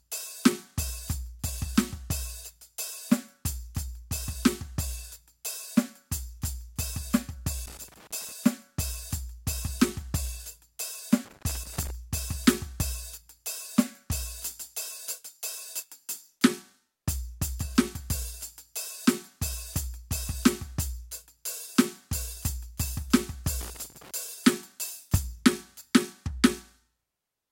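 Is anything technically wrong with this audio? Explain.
Yes. Three irregular bursts of crackle and scratching break into the music, from 7.66 to 8.32 s, 11.25 to 11.90 s and 23.61 to 24.11 s, each lasting around half a second to two-thirds of a second. This is loose connector crackle: a worn or dirty contact in the signal path makes and breaks rapidly as it shifts, chopping the music on and off, while any DC on the line adds pops, giving that rough, uneven scratching texture.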